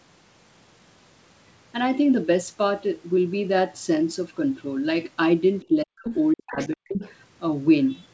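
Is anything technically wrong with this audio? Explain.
Yes. In three stretches, from 5.61 to 6.11 s, 6.34 to 6.58 s and 6.74 to 6.84 s, the talker's speech drops out in pieces, falling deeply, by about 40 dB. This is likely speech suppressed in double talk: an echo canceller confused by both sides speaking at once attenuated the near talker along with the echo.

Around those gaps, at 6.07 to 6.14 s, 6.61 to 6.69 s and 6.88 to 7.12 s, short scraps of a second voice come through, roughly 10, 20 and 5 dB below the main speech. This is likely the other side's voice leaking through, where loudspeaker playback reaching the microphone wasn't fully cancelled. The audio's top end stops at 8 kHz, which fits a wideband call codec such as G.722.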